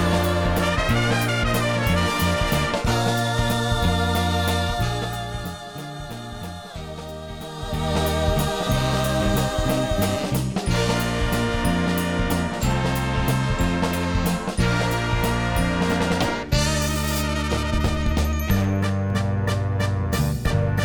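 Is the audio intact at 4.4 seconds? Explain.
Yes, the audio at 4.4 seconds is intact, with no fault audible at that moment.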